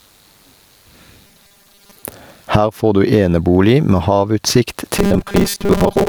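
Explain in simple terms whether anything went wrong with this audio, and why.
Throughout the clip there is gain pumping. The recording level was likely set far too high, so a fast limiter keeps pulling it down on each loud moment.

From 1.27 to 2.04 s and from 4.97 s to the end there is robotic sound from repeated short buffers. Audio likely arrived too slowly, so the software repeated short chunks for about half the time, forcing a rigid, metallic 200 Hz buzz onto the speech.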